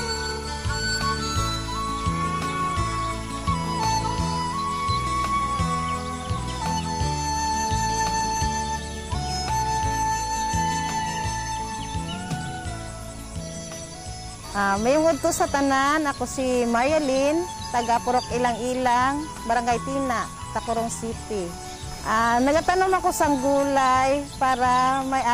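From 17.75 s to 22.87 s there are periodic USB or driver dropouts: about seven tiny gaps spaced 1.02 s apart, each a small fraction of a millisecond. A background task stalls the audio path at that fixed interval, and the missing samples are skipped rather than filled, so the waveform jumps abruptly at each point. The result is a regular tick. A spectrogram would show thin vertical broadband lines marching evenly across that stretch.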